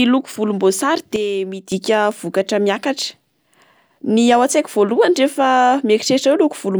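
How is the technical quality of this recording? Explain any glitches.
The recording has one clear technical fault, a sudden gain jump in the speech.

From 1.16 s to 1.72 s the level drops abruptly by about 9 dB and then returns just as abruptly. The speech and the background noise fall and rise together, which points to a gain change applied to the whole signal rather than to the talker moving. The step happens from one sample to the next, with no fade, and is likely a level setting or bit shift applied without a ramp.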